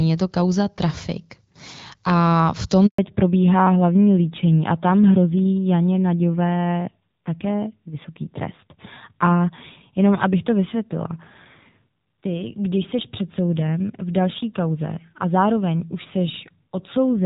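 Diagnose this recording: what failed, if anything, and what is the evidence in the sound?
Network stage: a handover gap runs from 2.86 s to 2.98 s. The speech falls away within a few tens of milliseconds and leaves 120 ms of silence before the audio resumes. The call was moved from one network to another, and no speech frames were delivered while the link switched over. The decoder had nothing to play, so whatever was said in that window is gone rather than concealed.

Codec stage: from 2.98 s to the end of the clip there is a fallback to narrowband. Before the gap, the speech carries content up toward 7 kHz with only light coding roughness, consistent with the AMR wideband (HD Voice) codec running at around 12.65 kbit/s. After the gap, nothing is present above 4 kHz, and the speech sounds duller and grittier. That points to the call renegotiating onto an older narrowband codec, which fits AMR-NB at about 7.4 kbit/s.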